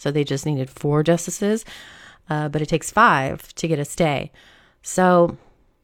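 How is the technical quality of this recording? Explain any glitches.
No audible glitches or faults.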